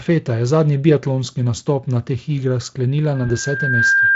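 From 3.15 s the microphone picks up its own loudspeaker and the loop gain passes one at 1.6 kHz, so a loudspeaker feedback squeal swells over most of a second to about 5 dB above the speech and holds to the end. At 3.27 to 3.37 s, under that howl, VoIP packet loss concealed by the speech codec makes the Speex decoder extend its last frame, and the speech is briefly stretched and fading. This fits a single lost 20 ms frame whose effects linger after packets resume.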